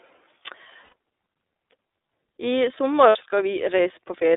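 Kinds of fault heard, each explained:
iLBC codec: The speech runs through a narrowband VoIP codec that codes each frame on its own. Only about 300 Hz to 3.7 kHz survives. The rough, synthetic edge is plainly audible and points to the 13.3 kbps mode with 30 ms frames.
Lost iLBC frames: Missing packets are filled by repeating the last pitch cycle with added noise, heard as a held, buzzy vowel. This occurs from 0.84 to 0.93 s and from 3.09 to 3.16 s, just after "I sommer". The voice returns almost immediately.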